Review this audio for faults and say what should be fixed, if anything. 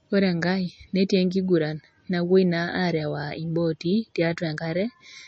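A likely MP3 compression stage starved of bits, consistent with about 32 kbps, removes everything above 8.2 kHz throughout and leaves the speech audibly watery and swirly. Encode at a higher bitrate, or keep an uncompressed master, to prevent it.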